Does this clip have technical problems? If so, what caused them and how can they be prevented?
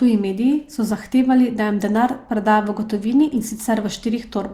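No, there's nothing technically wrong to hear in this one, so there's no cause to track down and nothing you need to change.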